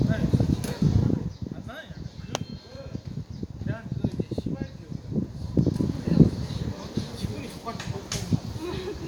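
A short recording of sounds, and the thing to flag is zipper noise between 5.16 and 6.0 s. The level drops, or rises, by around 10 dB there, but it moves in hard 2 dB jumps, about five a second, instead of gliding. Each jump leaves a small click, so you get a ticking zip riding on the sound for that stretch. That's unsmoothed gain stepping.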